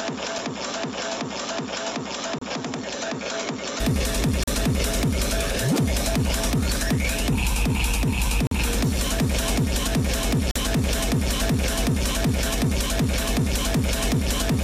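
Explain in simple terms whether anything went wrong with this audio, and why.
For the first 3.8 seconds, the recording likely came through a poorer microphone, an input switched to a poorer device. That device passes nothing above 7.6 kHz, so the sound is duller, a little quieter and carries a faint hiss of its own until it clears at 3.80 s, with no pause at the change.

Separately, there are gaps between stream segments. The audio arrives in 2-second pieces whose timing doesn't quite line up, and the player fills each mismatch with silence. That leaves sharp-edged holes at 0.38 s (4 ms), 2.38 to 2.41 s, 4.43 to 4.48 s, 8.47 to 8.52 s and 10.51 to 10.56 s, each 30 to 45 ms long. Nothing is lost; the sound just briefly stops.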